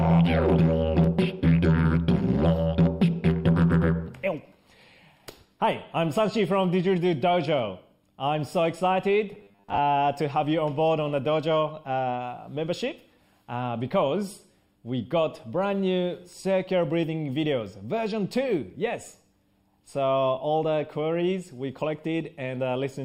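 A short stretch of robotic sound from repeated short buffers runs from 9.32 to 9.78 s in this audio recording. Across that span the sound turns into a rigid, metallic buzz locked at 100 Hz while still loosely tracking the underlying audio. The likely cause is new data arriving too seldom, so the playback side filled the gaps by looping the most recent fragment, one of about 10 ms, while most of the real audio in that window was skipped.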